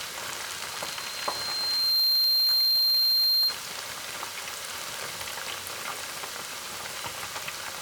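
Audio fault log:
0.47 to 3.61 s, loudspeaker feedback squeal: a microphone is picking up the loudspeaker it drives, and at 4.2 kHz the gain around that loop exceeds one, so that frequency keeps reinforcing itself on every pass. It is heard as a single high tone that swells over about one and a half seconds until it sits roughly 15 dB above the rest of the sound.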